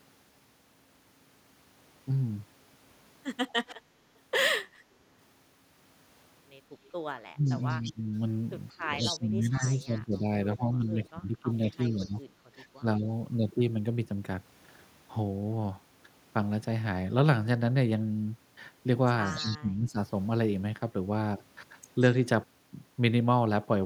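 At 3.49 to 3.75 s there's a faint echo leak, a copy of the speech trailing by 179 ms, about 20 dB down. It's likely a far-end speakerphone whose echo canceller let some of its mic pickup back through. It returns louder, only about 10 dB below the speech, from 6.84 to 12.1 s and again at 19.25 to 19.57 s, with the same 179 ms lag.

Overlapping that, speech is suppressed in double talk. From 7.33 to 8.05 s the voice dips hard, up to about 25 dB, for roughly a third of a second. From 9.01 to 13.07 s it sags by up to about 15 dB, adding up to around two seconds. At 19.36 to 19.99 s it drops about 20 dB for most of that span. In each case the canceller likely mistook the talker for echo while both sides spoke at once.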